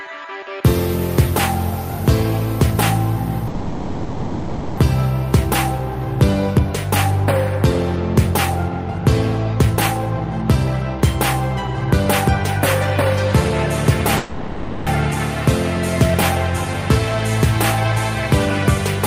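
At 3.47 s the sound stops moving forward and the last moment is held as a fading buzz until 4.79 s, about 1.3 s. At 14.17 s the same call audio freeze recurs for 0.7 s, ending at 14.89 s. Neither fill drops to silence. This is likely packets stalling in transit and the jitter buffer running dry. When the sound resumes it picks up where it left off, so nothing is lost, but playback falls further behind each time.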